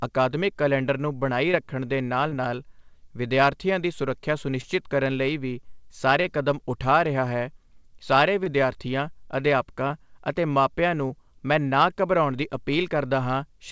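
Short concealed packet loss at 1.52, 2.29, 4.61, 6.22, 8.44, 9.88 and 11.08 s: each 20 ms hole, consistent with single lost packets, is filled by extending the preceding speech, heard as brief smears rather than silent dropouts, over audio with nothing above 8 kHz.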